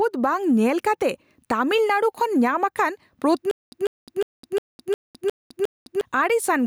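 From the start, the speech shows gain pumping. The gain swings by about 10 dB, pulled down on each loud sound. The likely cause is input gain set far too high, with a fast limiter pulling it back. Loud and soft parts sit close together, squashed.

From 3.51 s to 6.01 s there is a stutter with silent gaps. A burst of about 149 ms repeats seven times. Each repeat is followed by roughly 208 ms of digital silence, a steady 357 ms cycle. The likely cause is a stalled stream replaying its last fragment. The audio meant for that stretch is missing.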